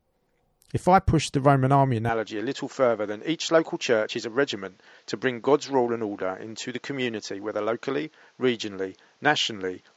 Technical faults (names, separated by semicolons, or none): input switched to a poorer device